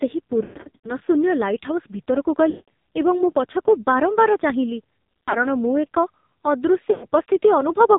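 Throughout the clip, the speech carries the sound of the AMR narrowband mobile codec under heavy strain. Nothing above 4 kHz survives, and the voice has the buzzy, synthetic quality of a vocal-tract model driven by very few pulses, which fits AMR-NB at a low mode around 5.9 kbps. Because so little of the excitation signal is coded, voiced sounds come out reedy and consonants come out thin.

Lost AMR speech frames then break up the signal four times. From 0.44 to 0.91 s, about 320 ms is missing across a 400 ms stretch, with the longest gap lasting 120 ms. The decoder stretches the last good pitch and spectral settings with falling gain, so the sound warbles, dips and fades toward silence before it recovers roughly. From 2.50 to 2.69 s, a single 180 ms gap is long enough to decay audibly to near silence. From 5.24 to 5.46 s, 100 ms of loss is scattered over 200 ms, with runs of up to 40 ms that produce short warbling dips. 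From 6.92 to 7.06 s, a 100 ms gap drags out the sound briefly and softens it.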